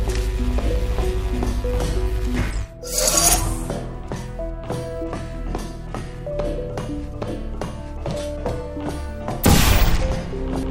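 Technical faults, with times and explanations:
No technical faults, with times or explanations, can be given, since none are heard.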